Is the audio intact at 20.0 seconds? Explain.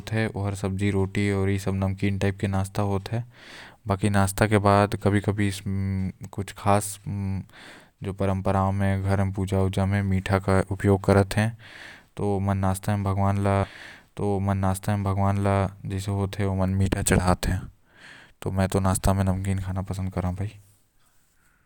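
Yes, at 20.0 seconds the speech plays through intact, with no dropout, click, distortion or other audible fault at that moment.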